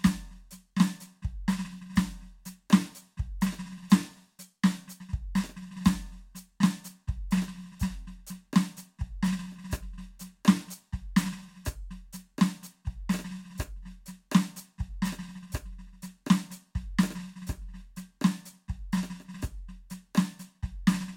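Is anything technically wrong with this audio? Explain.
No, nothing technically wrong is audible in this music.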